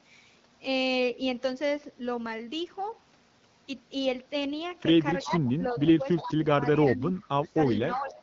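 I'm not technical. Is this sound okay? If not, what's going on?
No. The last three seconds show two problems, and both most likely come from a speakerphone being used on the call.

The first is speech suppressed in double talk. When both people talked at once, the call's echo-cancelling system likely couldn't tell this talker's voice apart from the loudspeaker sound, so it turned everything down. You hear the voice sink noticeably from 5.24 to 5.81 seconds, again from 5.97 to 6.62, and from 6.78 to the end.

The second is echo leak. The echo canceller on the loudspeaker side likely failed to remove all of what its microphone caught, so some of that sound came back down the line. It arrives 354 milliseconds late, a faint, ghostly repeat underneath the talker. It's heard briefly at 5.86 to 5.91 seconds, 6.16 to 6.33, 6.72 to 6.91 and 7.23 to 7.28, and in a longer stretch from 7.70 to 8.13. 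The one at 7.23 is very quiet. The ones around 6.2 and 6.8 seconds are the easiest to notice.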